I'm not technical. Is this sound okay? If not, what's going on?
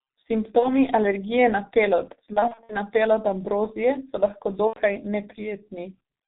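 No. The G.723.1 codec runs through the whole clip. This old internet-phone speech format squeezes the voice into very little data and drops everything above 4 kHz, so the speech sounds muffled and hoarse throughout, with consonants smeared and unclear.

VoIP packet loss concealed by the speech codec causes three dropouts. The first is at 0.59–0.76 s, just before "alergije na pelod". The second runs at 2.33–2.77 s, between "alergije na pelod" and "na pelod ambrozije so", where several short losses are scattered across the stretch. The last is at 4.67–4.81 s, after "pelod ambrozije so lahko". In each case pieces of the call went missing, and the decoder filled the gaps by stretching the last sound it had. That guess turns buzzy or fades, and the voice stays weak briefly afterwards.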